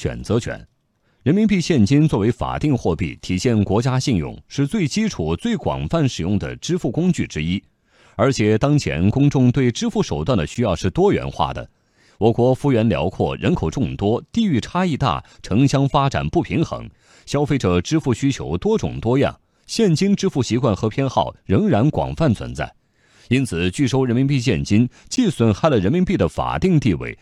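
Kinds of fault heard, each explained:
Block of digital silence: twice the output buffer was apparently not filled in time, so 11.6 ms of samples, which fits a 512-sample buffer, were replaced by zeros with no fade, cutting a brief tick-like hole into the speech at 10.55 s and 25.16 s.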